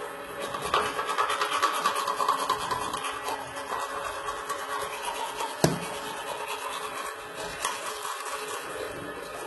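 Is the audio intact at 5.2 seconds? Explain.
No: likely HE-AAC compression, present throughout, rebuilds the treble from copied lower bands, so the highs sound gritty and metallic, with nothing above 11.8 kHz.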